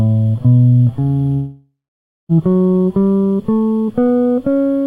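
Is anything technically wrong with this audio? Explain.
Yes, there's a long network dropout in the music from 1.33 to 2.32 s: the last sound stretches into a fading buzz, then about 0.55 s of silence. It resumes with nearly a second skipped, likely from audio that never arrived.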